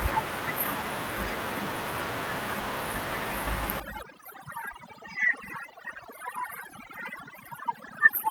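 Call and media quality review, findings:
Overdone noise removal, 3.80 s to end. Room noise, about 17 dB under speech before 3.80 s, collapses to near silence with twinkling specks. Probable component: noise suppressor set too aggressive, gating bands near its noise estimate. The damage starts at a single point, and the specks sit where the room noise was.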